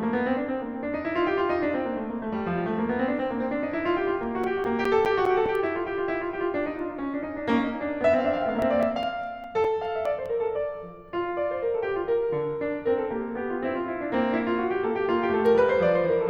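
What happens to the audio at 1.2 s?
Nothing goes wrong at 1.2 s; the music plays through that moment intact, with no dropout, click or distortion.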